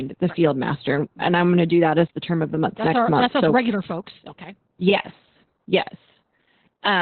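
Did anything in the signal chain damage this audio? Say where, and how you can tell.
Yes, at the codec stage: Opus voice compression, applied heavily throughout the speech. Nothing survives above about 4.3 kHz, so the speech sounds muffled, and it also has a hoarse, slightly robotic grain. That grain sets it apart from a plain low-pass filter or an analogue telephone line. The cutoff fits Opus's SILK coder at narrowband, which suggests a bitrate around 8 kbps. At that rate the excitation is coded so coarsely that the speech takes on this texture.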